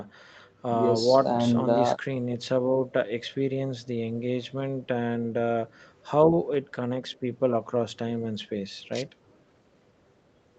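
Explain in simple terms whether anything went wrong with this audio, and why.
Nothing went wrong here.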